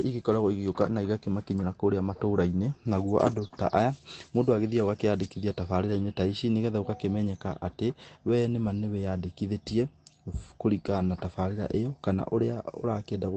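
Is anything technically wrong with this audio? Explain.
Yes, two packet-loss faults in this speech, both just past three seconds.

The first is a lost packet rebuilt from error correction, from 3.27 to 3.45 s. About 100 ms of audio never arrived, but each following packet carried a low-bitrate backup copy, and the decoder played those copies. There's no gap. The speech turns rougher and grainier for that stretch. On a spectrogram, harmonics in that band look smeared and noisier. The waveform stays continuous with no dropout.

Right after, from 3.47 to 3.52 s, comes a short concealed packet loss. About 20 ms was missing and about 23 ms was filled by extending the preceding sound and crossfading back into real audio. It's heard as a brief smear or wobble. The waveform shows a tiny stretch of extrapolated signal. The spectrogram shows a short blurred slice rather than a silent gap. Throughout, the Opus call path keeps content below about 8 kHz.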